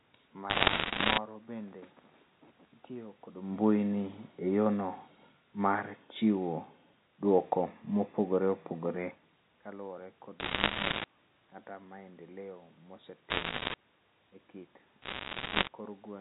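Speech over a G.711 mu-law phone line, with four short bursts of crackle from bit errors on the digital phone line, at 0.5–1.18 s, 10.4–11.04 s, 13.3–13.74 s and 15.02–15.68 s. Each flipped bit corrupts a single sample, and a hit on a high-order bit or on the sign of a loud sample jumps that sample hard, so you get sharp ticks piling into crackle. The error rate sounds like a few percent, sitting on top of the unchanged voice.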